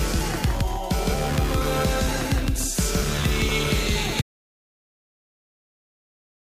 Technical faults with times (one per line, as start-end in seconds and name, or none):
0.00-6.41 doubled audio track
4.22-6.41 audio dropout to silence